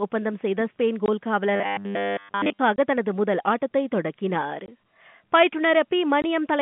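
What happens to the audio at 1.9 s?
At 1.9 s the speech has collapsed into a rigid, metallic buzz pitched at 100 Hz, running from 1.56 to 2.59 s; the speech still roughly follows its shape. This is robotic sound from repeated short buffers, likely caused by audio arriving too late, so the player kept looping a fragment of about 10 ms for most of that stretch while fresh audio was dropped, stamping its repeat rate on the sound.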